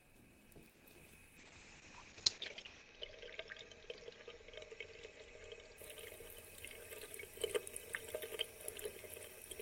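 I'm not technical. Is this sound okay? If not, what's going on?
No. There are three kinds of problem, all near the start.

From 0.71 to 0.82 s there is a short stall from a late packet. A piece of the audio arrived late, so the receiver held the last sound for about 90 ms until the rest caught up. Nothing is lost. The sound just hangs a moment too long, perhaps with a faint buzz, and then carries on where it left off. Everything after it plays slightly later.

At 0.92 s and again at 1.07 s there is short concealed packet loss. Each time a tiny slice of sound, about 20 ms, never arrived. The receiver covered the gap by briefly continuing what came before, which you may hear as a quick smear or wobble. Unlike the stall, this sound is actually gone, and the audio does not end up running later.

From 1.39 to 5.84 s there is a call bitrate drop. The connection seemed to weaken, so the sender switched to a much cheaper, rougher way of coding the audio. 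The crisp top end above about 8 kHz disappears, and the sound turns muffled and somewhat watery. It is at its worst for roughly a second and a half. Unlike the brief glitches, this lasts several seconds before clarity returns.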